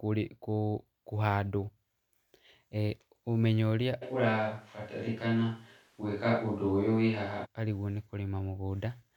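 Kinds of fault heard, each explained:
Switch to a distant microphone: from 4.04 s, just after "e ũmenyo ũrĩa", until 7.44 s, the speech abruptly turns roomy and hollow with thinner bass, then snaps back just as suddenly. The likely cause is that the close microphone's signal dropped out and a microphone further from the speaker filled in, capturing more room reflection. The loudness stays about the same, and room noise sits roughly 35 dB below the speech.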